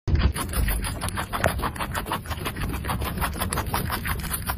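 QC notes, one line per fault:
Nothing stood out on listening to this clip.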